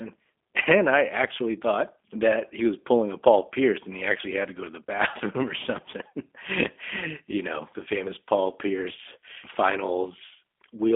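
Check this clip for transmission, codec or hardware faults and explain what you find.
One codec fault is present. Throughout the speech there is G.729 coding damage: the sound is rebuilt from a vocal-tract filter, pitch predictor and sparse pulses, so it sounds rough and synthetic, which fits an 8 kbit/s codec. Nothing above 3.7 kHz survives, and the band sits at about 250 Hz to 3.5 kHz. A plain telephone band-limit would be muffled but clean, not buzzy and synthetic like this.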